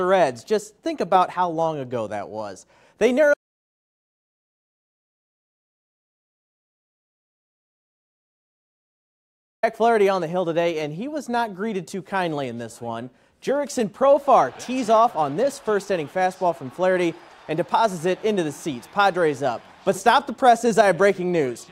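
From 3.34 to 9.63 s, an audio dropout to silence: 6.29 s of silence, likely lost input, showing as a flat waveform line and a blank spectrogram band.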